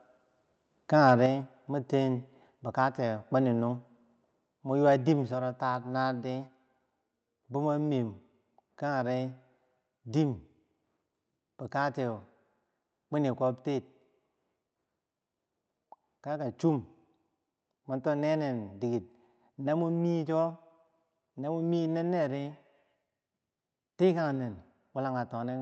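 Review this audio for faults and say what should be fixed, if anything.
Microphone volume stepped down at 1.26 s: the speech and the background beneath it drop together by about 4 dB in a single instant, with no fade, and stay at the lower level afterwards. A step that abrupt, affecting everything at once, is most likely the call software's automatic gain control judging the input too hot and cutting the device's input volume in one move. To prevent it, set the microphone level conservatively beforehand and disable automatic input adjustment in the call software.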